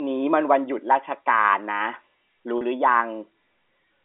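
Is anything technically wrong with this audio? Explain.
Yes. At 2.58 to 2.61 s the speech briefly holds on a slightly buzzy, frozen tone for about 30 ms. This is packet loss with pitch repetition: a gap consistent with a single lost packet was bridged by the receiver replaying the last pitch period until fresh audio arrived. The narrow telephone band, roughly 250 Hz to 3.6 kHz, comes from the G.711 coding on the line.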